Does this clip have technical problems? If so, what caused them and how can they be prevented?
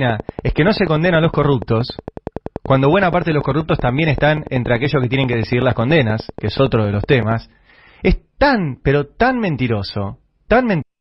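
Yes. A train of clicks runs from 0.1 s to 7.3 s: around seventy sharp, near-identical ticks at a regular 10.5 per second, standing out well above the sound and continuing through the pauses. This is likely interference from nearby equipment or a faulty connection or power supply. To prevent it, move or power down nearby electrical devices, use shielded cabling, and make sure the interface has a stable connection and enough processing headroom.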